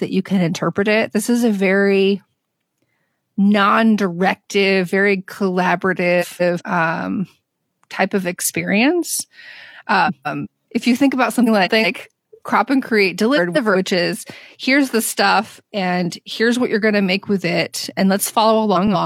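Speech with frames out of order at 6.21, 10.07 (just before "if you think about"), 11.46, 13.36 and 18.75 s: adjacent blocks of about 186 ms, consistent with four-frame runs, play swapped, giving garbled flutter, with visible waveform and spectrogram discontinuities at each join.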